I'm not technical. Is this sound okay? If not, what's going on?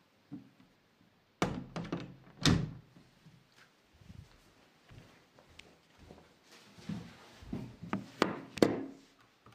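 Yes, this sound is okay. Nothing in it stands out as a technical problem.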